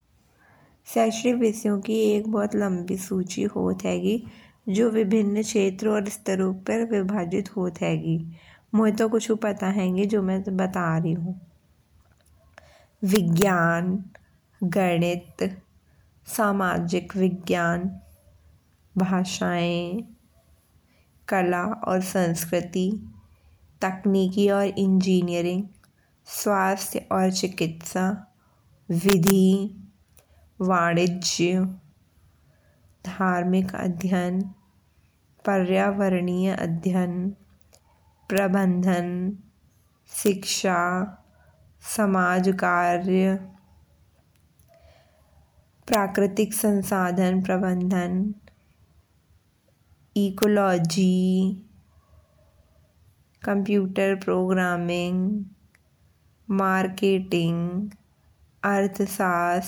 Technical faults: integer overflow

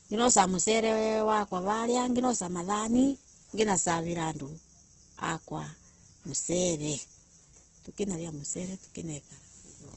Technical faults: Opus compression

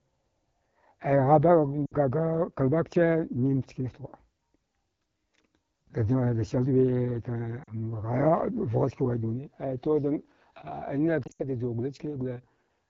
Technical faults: AMR wideband (HD Voice) codec; lost AMR speech frames

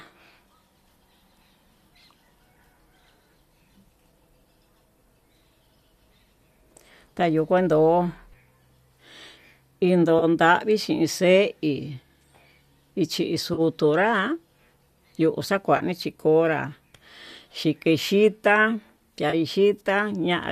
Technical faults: AAC frame loss with concealment

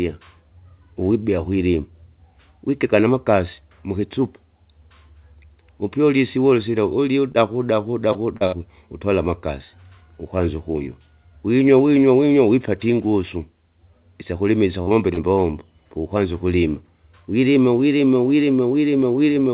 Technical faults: short concealed packet loss; burst of packet loss

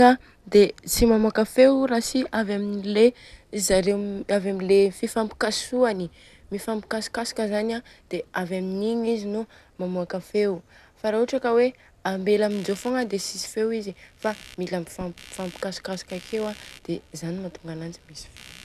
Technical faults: computer activity noise

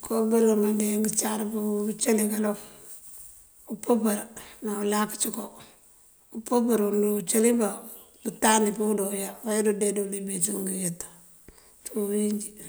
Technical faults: none

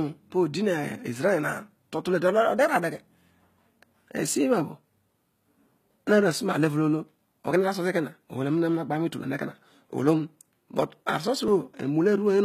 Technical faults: HE-AAC compression; dropped buffer (overrun)

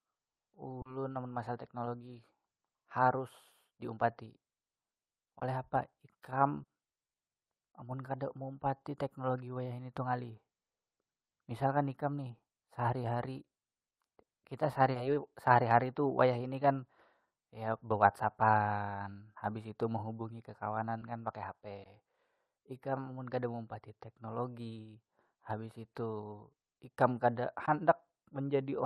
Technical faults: short concealed packet loss

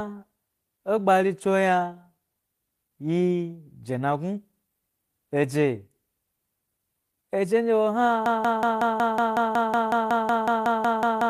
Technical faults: broken-record loop

